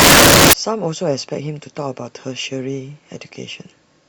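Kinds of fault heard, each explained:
Samples built from the wrong bytes: from the very start until about 0.53 s, the speech is buried under loud, harsh broadband noise because each sample has been assembled from its bytes in the wrong order or alignment, so the rapidly changing low-order bits end up as the large part of every value.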